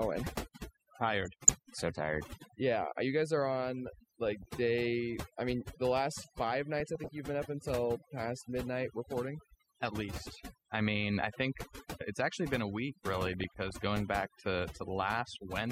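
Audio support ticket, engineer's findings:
Overdone noise removal, whole clip. Background drops and breaks up into twinkly specks. Noise reducer set too hard: bands sitting near its noise estimate get cut, and quiet bits of the voice go with them. The artefacts come from the denoiser, not the source. Check the plugin strength and back it off, or grab the pre-processing file if we still have it.

DAB burbling, short bursts at 1.25 to 1.50 s, 4.42 to 4.51 s, 6.77 to 7.18 s, 10.33 to 10.40 s and 13.26 to 13.71 s. Burbling blips riding over the speech. Weak DAB reception, so bit errors slip past error correction into the MP2 stream. Bad samples put noise blips in single sub-bands, and bad scale factors make sub-bands jump for up to a frame. Last burst has a heavier error rate, about 0.4% against 0.2% elsewhere. Receiver or antenna side.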